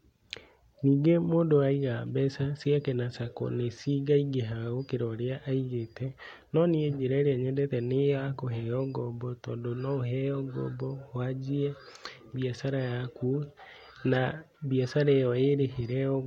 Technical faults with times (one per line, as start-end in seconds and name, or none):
none